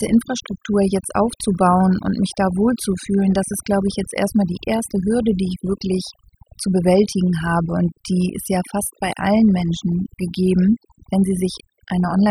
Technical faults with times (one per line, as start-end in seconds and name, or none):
0.00-12.30 overdone noise removal